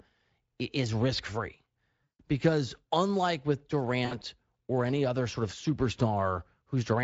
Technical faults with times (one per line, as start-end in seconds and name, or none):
2.04-2.22 VoIP packet loss concealed by the speech codec
4.05-4.24 VoIP packet loss concealed by the speech codec